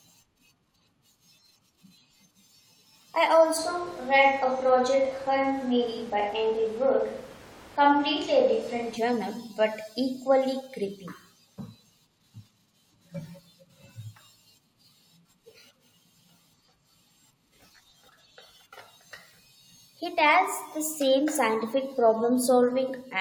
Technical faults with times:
3.59-8.95 switch to a distant microphone

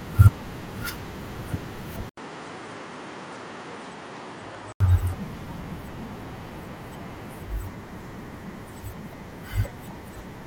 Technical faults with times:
2.09-4.80 input switched to a poorer device

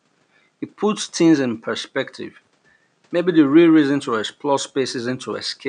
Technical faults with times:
none

